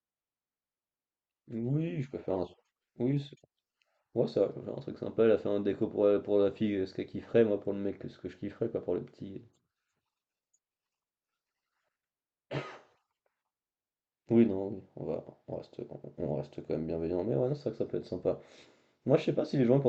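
No technical faults are audible.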